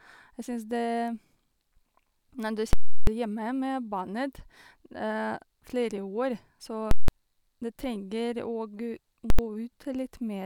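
At 2.73 s the speech is cut by invalid numbers at full scale: some calculation blew up to infinite or invalid values, and the output got pinned at one extreme for 341 ms, which fits a 16384-sample block. You hear a huge pop at 2.73 s, dead air, then another at 3.07 s. It happens again at 6.91 s for 171 ms, and at 9.30 s for just 85 ms, where the two pops nearly merge into one bang.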